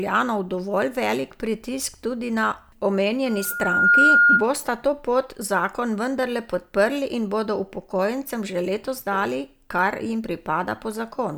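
From 3.26 s to 4.48 s, a loudspeaker feedback squeal appears: a single 1.4 kHz tone swells over roughly 0.7 s until it sits about 10 dB above the speech. The microphone is picking up its own loudspeaker, and loop gain exceeds unity at that frequency.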